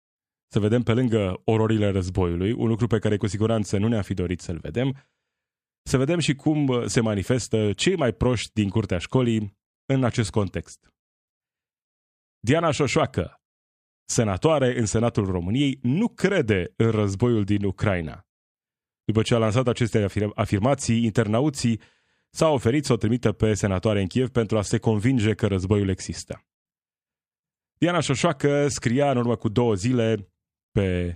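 A speech recording with nothing technically wrong with it.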